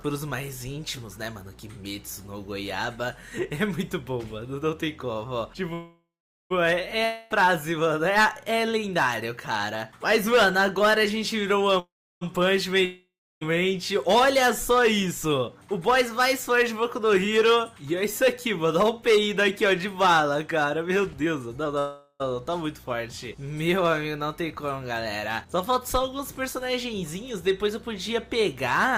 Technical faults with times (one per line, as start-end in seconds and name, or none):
5.73-6.52 call audio freeze
7.05-7.32 long network dropout
11.79-12.23 call audio freeze
12.85-13.43 long network dropout
15.29-21.77 jitter buffer speed-up
21.79-22.22 call audio freeze
26.94-28.88 jitter buffer speed-up